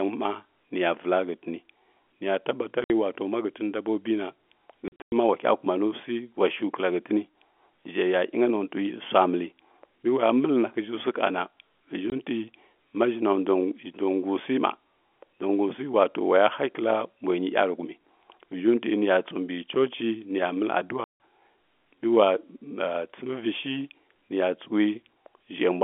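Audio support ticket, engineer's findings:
Packet loss filled with silence, speech path. Hard-edged dropouts: 2.84–2.90 s (60 ms), 4.88–5.12 s (180 ms lost in a scattered burst, longest hole 100 ms, just before "ma wa"), 12.10 s (20 ms), 21.04–21.17 s. Hole lengths are multiples of 20 ms, which fits 20 ms packets. No concealment, so gaps are filled with silence. Narrowband G.711 telephone coding audible throughout.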